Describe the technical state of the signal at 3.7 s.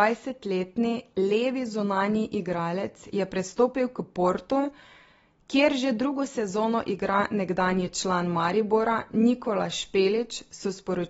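At 3.7 s the speech carries AAC compression damage, as it does throughout: nothing above about 7.6 kHz, dull and smeared tone, fizzy warbling on sibilants. This likely comes from AAC-LC coding at a low bitrate near 24 kbps, which lowers the cut-off.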